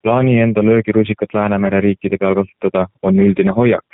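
A short speech recording that's been through the G.729 codec the whole way, and you can plainly hear it. Everything above 4 kHz is gone, and the speech is rebuilt from a coarse pitch-and-pulse model, which fits an 8 kbit/s VoIP link and gives it that rough, slightly synthetic edge.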